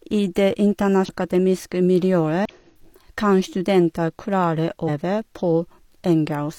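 Three brief blips cut into the speech, at 1.05 to 1.09 s, 2.45 to 2.51 s and 4.84 to 4.89 s. Each is damaged data in a compressed stream. Corrupted bytes make the decoder misread frames and lose sync. It then hunts for the next header, producing a short glitch.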